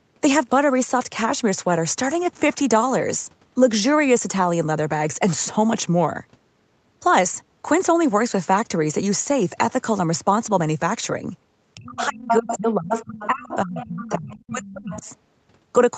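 Speech suppressed in double talk runs from 11.75 to 15.05 s. The talker's level sinks for roughly three seconds, falling by as much as about 30 dB, likely because the echo canceller heard both sides at once and turned everything down.

Other side's voice leaking through overlaps it from 12.28 to 14.49 s, with a second voice only about 5 dB below the talker. It returns faintly, about 20 dB down, from 14.91 to 15.00 s, likely as loudspeaker playback the canceller left in the microphone signal.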